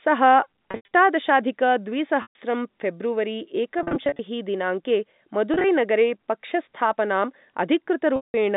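Packet loss with pitch repetition interrupts the speech five times: 0.71–0.88 s (scattered, longest gap 90 ms), 2.22–2.35 s (one solid 130 ms gap), 3.79–4.19 s (short gaps up to 40 ms), 5.54–5.64 s and 8.16–8.34 s (solid). The receiver fills each gap by looping the last pitch period, so the speech briefly buzzes on one held tone. A waveform shows identical repeating cycles that taper. A spectrogram shows flat, frozen harmonic lines within the 4 kHz telephone band.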